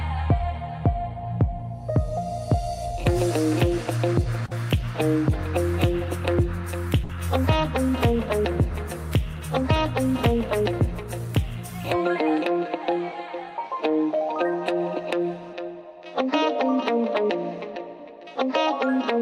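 Burst of packet loss at 4.45 to 4.54 s and again at 7.03 to 7.12 s: each time, a run of about 60 ms went missing. The receiver extended the preceding sound and faded it across that gap before resuming further along, leaving a brief decaying smear and a small jump.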